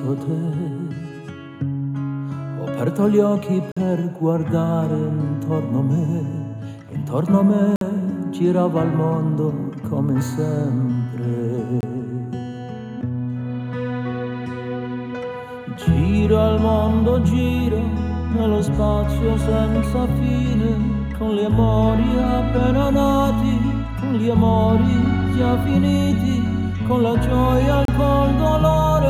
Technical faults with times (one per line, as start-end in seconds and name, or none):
3.72-3.77 gap between stream segments
7.76-7.81 gap between stream segments
11.81-11.83 gap between stream segments
27.85-27.88 gap between stream segments